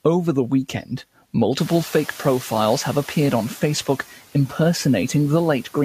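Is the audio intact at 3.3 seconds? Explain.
No. At 3.3 s the noise suppressor is still catching up, from 1.59 to 3.35 s. The room noise jumped around 1.5 s, and the suppressor's noise estimate took about 1.76 s to follow, so the noise comes through with less reduction at first before sinking by about 4 dB. A spectrogram shows a noise floor that fades as it adapts.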